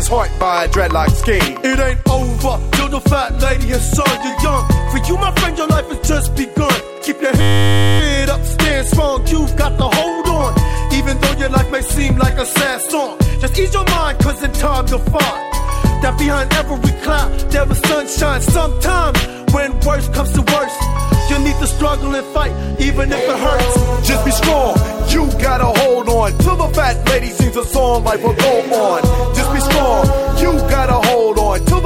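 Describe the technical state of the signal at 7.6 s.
At 7.6 s the signal is inside a system hang loop running from 7.41 to 8.0 s. The system froze while the output hardware kept replaying the same 10 ms buffer, about 59 times, producing a steady 100 Hz buzz instead of the sound.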